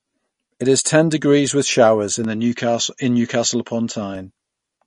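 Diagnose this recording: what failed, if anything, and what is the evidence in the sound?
Throughout, the speech sounds watery and swirly, with nothing above 10.6 kHz and smeared consonant attacks. This is likely MP3 compression at the codec stage, with the damage pointing to a low bitrate around 40 kbps. The encoder cuts the treble at a fixed point and drops weak frequency lines frame by frame.

From 2.25 s, right after "degrees with showers in", until 4.15 s, the sound turns duller and boxier. The band narrows to 7.6 kHz and a faint new noise floor appears far below the speech, with no gap at the switch and no level jump. The likely cause is the input switching to a poorer device at the capture stage. That device passes a narrower band and carries its own tone and noise.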